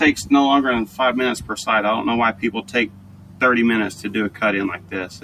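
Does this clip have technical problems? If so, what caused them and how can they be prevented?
Yes. A noise suppressor built for speech was left running on music or sounds throughout, treating sustained tones and ambience as noise. Its gain swings by roughly 10 dB, so the sound pumps and thins. Unlike a compressor's pumping, sharp attacks mostly get through while held material sinks. Bypass speech noise suppression for non-speech material.

The sound was also cut by the noise suppressor in three places: 2.33 to 3.41 s (about 11 dB), 3.92 to 4.08 s (about 7 dB) and 4.77 s to the end (about 11 dB). Sustained parts and decays drop away, which sets this apart from a dropout, where everything vanishes at once. Disabling the suppressor, or switching it to a music mode, prevents these cuts.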